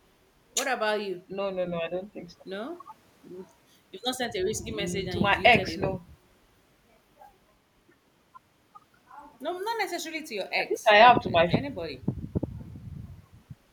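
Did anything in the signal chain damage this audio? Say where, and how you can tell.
No, nothing in the signal chain damaged this audio.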